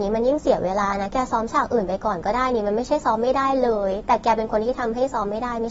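From start to finish the speech is band-limited, with nothing above 7.6 kHz, and sounds dull and smeared, with a fizzy, warbling texture on sibilants. That points to AAC compression, likely AAC-LC at a low bitrate around 24 kbps, starving high frequencies.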